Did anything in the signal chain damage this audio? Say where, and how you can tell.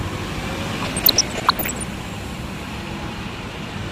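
Yes: DAB burbling, codec stage, 0.82 to 1.83 s. Reception bit errors corrupt MP2 sub-bands, which jump for single frames, appearing as bright spectrogram blocks.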